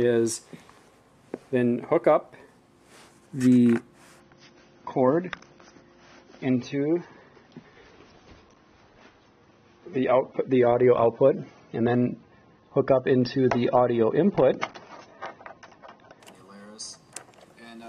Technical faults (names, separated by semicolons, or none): adaptive stream at a lower bitrate